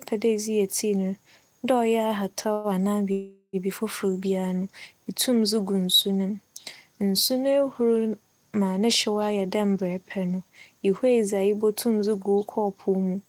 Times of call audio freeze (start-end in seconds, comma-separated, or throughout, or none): 2.53-2.67, 3.12-3.56